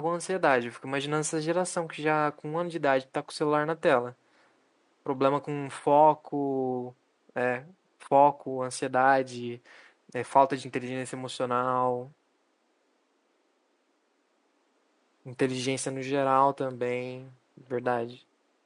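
No technical faults are audible in the speech; the only background is the room's own ambient noise, sitting about 43 dB below the voice and belonging to the recording itself.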